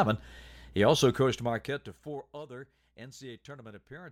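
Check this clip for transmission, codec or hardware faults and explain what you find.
Nothing here points to a transmission, codec or hardware problem, so there's no fault to dig into in this bit of speech.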